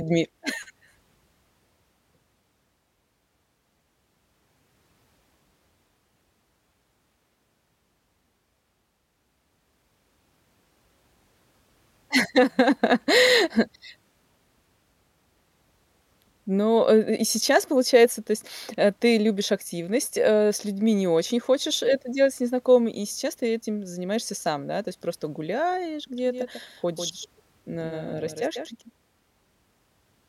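From 26.18 s to the end, a doubled audio track appears: a second full-band copy of the speech about 150 ms late and about 5 dB quieter, likely from a slower capture path mixed back in. Unlike echo or reverb, it starts abruptly and has no decay or room colour.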